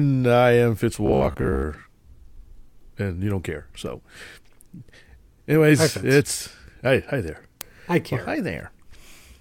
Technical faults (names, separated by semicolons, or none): robotic sound from repeated short buffers